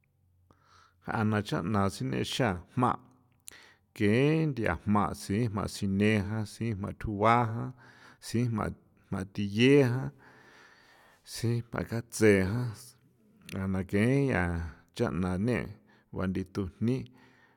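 Speech, with nothing technically wrong with it.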